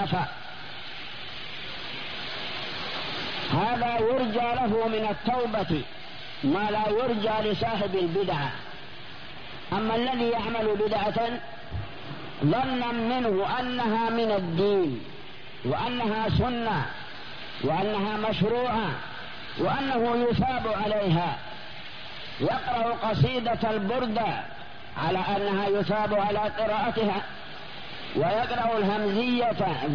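No technical faults can be heard anywhere in the recording.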